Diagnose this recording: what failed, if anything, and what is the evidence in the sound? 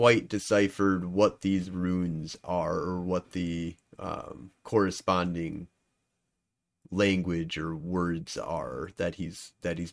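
Nothing failed in this recording, and the sound gives no evidence of any fault at any stage.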